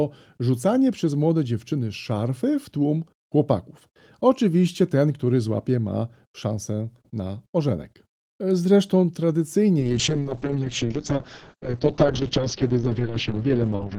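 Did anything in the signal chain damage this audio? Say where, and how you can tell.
Yes. At 9.8 s a call bitrate drop hits the codec stage. Coding falls from 32 to 6 kbps and bandwidth from 20 kHz to 6 kHz. The speech turns coarse and muffled through to the end.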